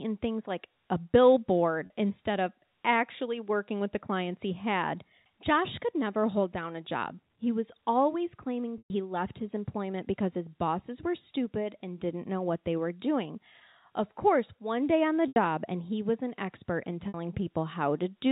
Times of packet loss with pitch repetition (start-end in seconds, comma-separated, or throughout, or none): 1.86-1.90, 8.78-8.90, 15.28-15.36, 17.08-17.14